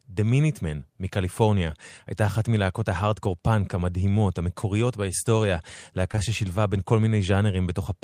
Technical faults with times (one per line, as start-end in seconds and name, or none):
6.11-6.19 short concealed packet loss